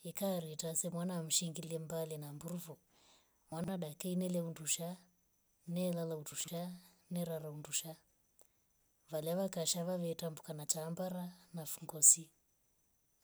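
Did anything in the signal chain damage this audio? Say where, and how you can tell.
Yes, chunks out of order in the network or buffer stage. At 3.52 to 3.68 s, just before "daika ingile huundusha", and again at 6.32 to 6.48 s, a 40 ms chunk plays three chunks late, jumbling the speech briefly.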